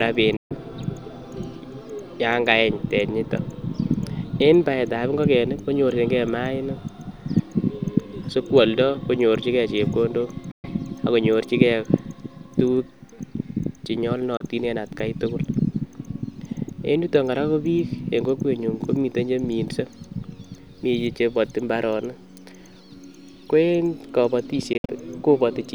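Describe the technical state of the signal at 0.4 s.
A Bluetooth dropout covers 0.4 s, running from 0.36 to 0.55 s. The speech cuts out into a hole of silence, then comes back further along, as though it had kept playing through the gap rather than pausing. The likely cause is audio packets failing to reach the headphones in time and being discarded, so the output stayed silent until good packets arrived, which fits about nine lost frames.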